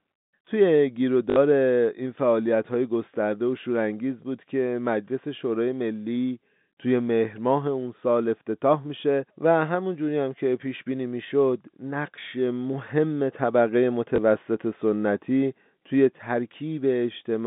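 At 1.30–1.36 s and 14.16–14.18 s, packet loss with last packet repeated: the receiver replays the previous 20 ms block, thrice then once, giving a robotic stutter, then a small blip. The waveform shows identical copies with steps at each join; the spectrogram shows vertical click lines over the telephone band.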